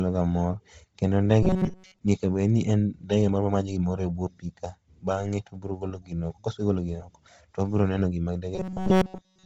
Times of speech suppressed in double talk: none

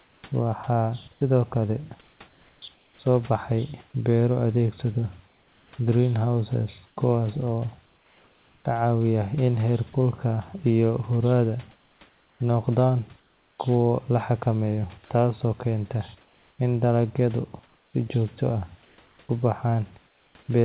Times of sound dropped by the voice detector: 9.93

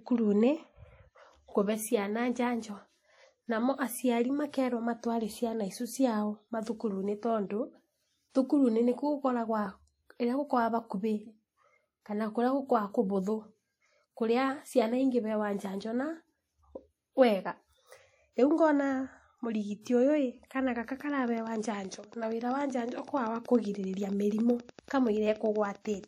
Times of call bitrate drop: none

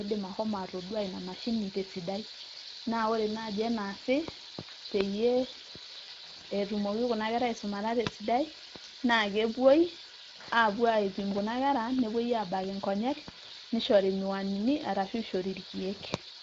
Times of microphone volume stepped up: none

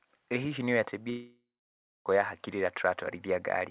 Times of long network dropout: 1.10-2.08

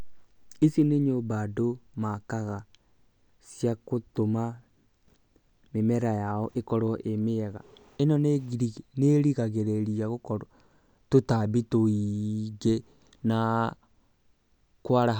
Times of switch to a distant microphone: none

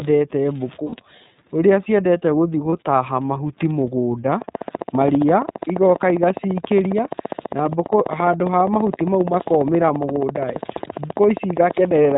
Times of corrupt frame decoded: none

